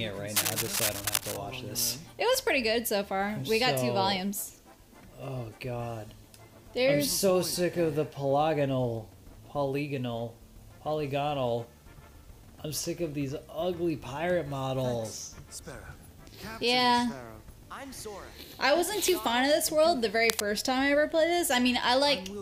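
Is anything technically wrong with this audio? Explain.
Yes. Cable scratch noise occurs from 0.36 to 1.37 s, roughly as loud as the sound, and again, slightly quieter, from 20.22 to 20.45 s. Dense, uneven rustling bursts sit on top, likely from a worn cable or connector being moved.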